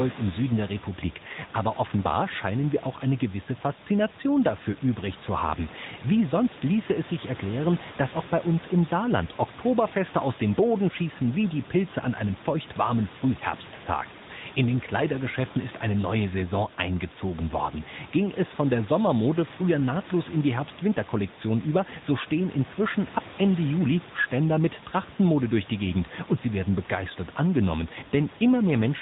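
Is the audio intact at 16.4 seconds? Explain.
No. At 16.4 seconds the speech is still passing through the AMR narrowband mobile codec, which affects the whole clip. This codec samples at 8 kHz, so nothing above 4 kHz survives and the sound is thin and muffled. It rebuilds speech from a vocal-tract model fed by a few pulses per 5 ms subframe. At 10.2 kbps that gives a plainly audible buzzy, synthetic edge. The room noise, about 16 dB below the speech, is part of the recording.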